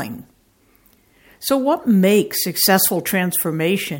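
Nothing in the speech stood out as a technical fault on listening.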